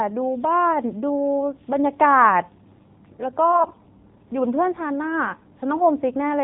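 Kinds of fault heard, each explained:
AMR narrowband mobile codec: nothing above 4 kHz, and the speech sounds buzzy and synthetic, which fits a low rate near 7.4 kbps, not mere low-pass filtering.
AMR bit errors: from 3.50 to 3.79 s, misplaced excitation pulses make the speech hoarse and gargly while pitch and level hold, unlike a dropout or mute.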